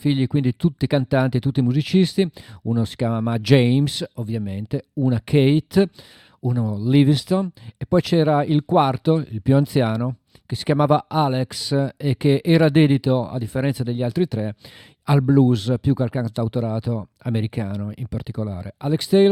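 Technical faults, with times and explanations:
No technical faults are audible in this speech recording.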